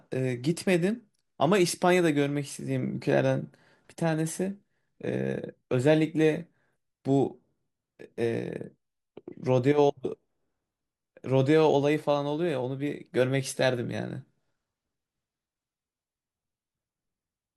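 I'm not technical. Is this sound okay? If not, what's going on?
Yes, no faults here.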